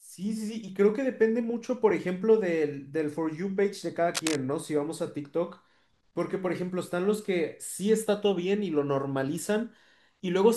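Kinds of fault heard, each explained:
Cable scratch noise: at 4.14 to 4.37 s, dense, uneven crackle sits only a few decibels under the speech, likely a worn connector being moved.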